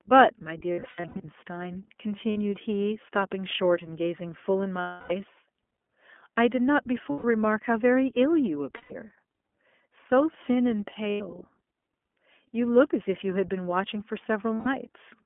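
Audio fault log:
throughout: iLBC codec. The speech is squeezed into a phone band of roughly 250 Hz to 3.4 kHz with a plainly rough, slightly synthetic edge, which fits iLBC's 20 ms frame mode at 15.2 kbps, where each frame's excitation is coded on its own.
0.72–1.25, 2.30–2.38, 4.80–5.13, 7.10–7.25, 8.76–8.93, 11.10–11.22 and 14.55–14.68 s: lost iLBC frames. Each gap becomes a held, buzzy vowel as the decoder repeats the last pitch cycle with noise. The first is a cluster of short dropouts, the longest around 70 ms. Others run 60 to 300 ms. Because the frames stand alone, the speech snaps back right after each one.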